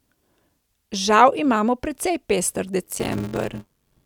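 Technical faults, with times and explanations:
2.83 to 4.06 s: block size mismatch (padded). A steady 93.8 Hz buzz appears. Each block is written short and zero-filled, which fits 512-sample reads. The gaps cause the buzz. Speech slows to 0.625 times normal speed, with its timbre unchanged.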